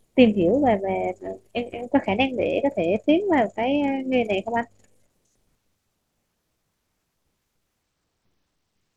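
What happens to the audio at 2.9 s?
A Bluetooth SBC bit pool drop runs from 2.06 to 5.10 s, so 2.9 s falls inside it. The link cut its bit budget, consistent with a pool falling from 28 to 13. Upper sub-bands starve, so the speech turns dull and gritty until recovery.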